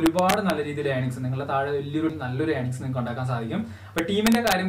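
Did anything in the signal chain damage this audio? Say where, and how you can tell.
Yes. Integer overflow in sample-format conversion, from 0.06 to 0.5 s and 3.98 to 4.52 s: peaks driven about 2 dB over full scale wrap to the opposite rail, seen as vertical full-range jumps in the waveform and heard as harsh cracks.

A CD skip during playback at 2.09 s: a brief mute of a few milliseconds, then the audio resumes elsewhere, shown as a tiny gap and an abrupt discontinuity on the spectrogram.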